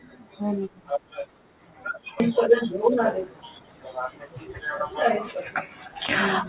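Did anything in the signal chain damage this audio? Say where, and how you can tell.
Yes. At 2.20 to 2.22 s the speech jumps forward with no gap and no fill: roughly a second of speech is simply missing, and the two sides are butted together almost seamlessly. This is a skip ahead at the network and jitter buffer stage. Audio arrived late or piled up, the buffer overflowed, and the receiver discarded the backlog to catch up with audio already waiting. The delay dropped by about a second in one step.

Right after that jump, from 2.25 to 4.52 s, the speech sounds rushed. It runs at about 117% speed but keeps its normal pitch. This is jitter buffer speed-up in the same receive stage. The buffer still held more audio than its target, so it repeatedly cut out short pitch-period-length slices until it had trimmed close to half a second. Through all of this, the band still stops at 4 kHz, as expected for a G.711 A-law call path at 64 kbps.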